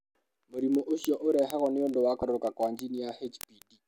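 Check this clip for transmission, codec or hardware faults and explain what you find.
Two faults are audible in the speech: a steady stream of clock ticks and one brief decoding glitch.

From 0.11 s to the end at about 3.87 s, a sharp tick of uneven strength repeats roughly every 20 ms, around 150 in all. These are word clock ticks. The receiving device is running on its own clock rather than locking to the sender's, and the two drift apart by something like a thousand parts per million. Each time they slip by a sample, one sample is dropped or repeated and its neighbours are misread, producing the click.

At 2.20 to 2.23 s, a brief glitch cuts across the speech. This is damaged data in a compressed stream. Part of the encoded data there was lost or corrupted, so the decoder misreads or discards those frames. It then loses its place and searches for the next valid frame header.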